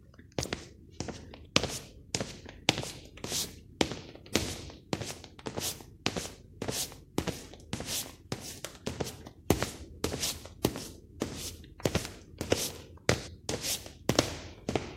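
The clip is a recording of sounds. Near the end, from 13.26 to 13.28 s, there is damaged data in a compressed stream. For about 21 ms the encoded data is corrupt. The bytes may have been lost, zeroed, overwritten or mixed with foreign data. The decoder misreads or rejects the affected frames and loses sync. It then hunts for the next valid frame header. The result is a brief chirp, squawk, click or gap.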